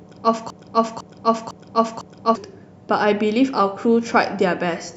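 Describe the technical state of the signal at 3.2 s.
At 3.2 s the speech signal is intact, with no audible technical fault at that point.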